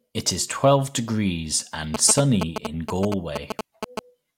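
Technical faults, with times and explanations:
1.94 to 3.99 s, GSM signalling bursts: A galloping dit-dit-dit pattern of ticks and short buzzes cuts across the speech, about as loud as the speech itself. The buzz sits at about 217 Hz, the repeat rate of a 2G phone's radio bursts. Here a nearby phone is only signalling, so the bursts arrive in short groups, not a steady stream. The audio circuit rectifies this radio energy and turns it into audible clicks and buzz.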